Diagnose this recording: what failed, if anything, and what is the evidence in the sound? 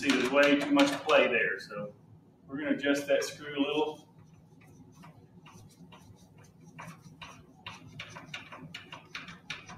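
A speech-oriented noise suppressor in the call-processing stage was left running on non-speech audio for the whole clip. It treats steady tones, ambience and reverberant tails as noise and pulls them down, while sharp onsets pass with less loss. The gain it applies moves over a range of around 15 dB, so the level keeps shifting as the processor switches between letting material through and attenuating it.

The clearest evidence is where the noise suppressor cut sustained sound more than its surroundings, at 1.92 to 2.49 s, 3.99 to 5.43 s, 5.67 to 6.74 s, 6.97 to 7.19 s and 7.38 to 7.65 s, each dipping by up to about 6 dB. In these stretches held or decaying material sinks or ends early, because the suppressor's estimate has classed it as stationary noise.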